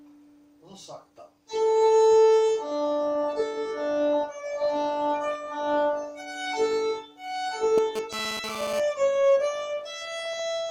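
A 2G phone close to the recording chain transmitted a short data burst, and the audio circuitry rectified its radio pulses, producing GSM phone buzz from 7.78 to 8.8 s. The pulses repeat at about 217 Hz, so the interference is a hard, raspy buzz on that fundamental with a dense stack of harmonics, unrelated to the underlying sound and sitting only about 10 dB below it. Because the phone was moving data rather than holding a call, the buzz arrives abruptly and stops after roughly a second.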